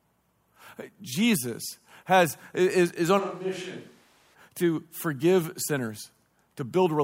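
Right after "has is is on", at 3.21 s, the sound jumps to a distant microphone: suddenly roomy and hollow, thinner in the bass, about 10 dB quieter, with room noise only about 25 dB below the speech. It snaps back at 4.33 s before "to forgive", likely because the close mic dropped out.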